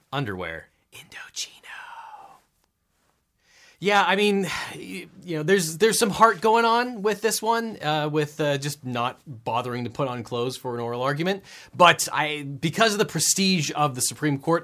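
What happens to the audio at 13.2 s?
Nothing goes wrong at 13.2 s; the speech carries on intact there with no dropout, click, distortion or other fault.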